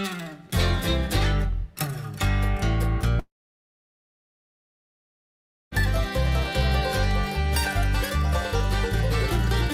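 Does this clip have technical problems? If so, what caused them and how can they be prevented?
Yes. A long network dropout runs from 3.19 to 5.74 s. The last sound is stretched into a brief fading buzz, then about 2.4 s of near-silence follows before audio resumes with roughly 2.5 s lost, likely from packets that stopped arriving. A more stable connection and a larger jitter buffer or forward error correction would prevent it.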